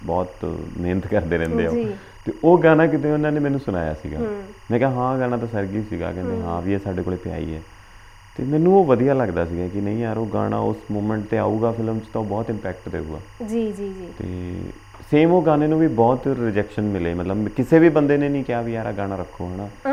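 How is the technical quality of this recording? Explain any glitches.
The recording carries one continuous fault, timecode bleed, present from start to finish. A linear timecode signal running at 24 frames per second is leaking into the audio, likely through crosstalk from an adjacent track or cable. Because the code is a square wave flipping between roughly 1 kHz and 2 kHz, it comes through as a thin, steady chirping warble sitting about 30 dB under the main sound. On a spectrogram it appears as unbroken horizontal bands near 1 kHz and 2 kHz with their odd harmonics above, flickering in a regular pattern. In the waveform it is too low to see beneath the main sound.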